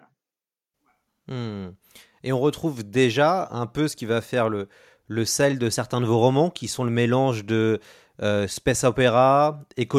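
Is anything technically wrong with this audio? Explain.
No, nothing is technically wrong with this audio.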